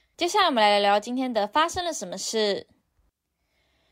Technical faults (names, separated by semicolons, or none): none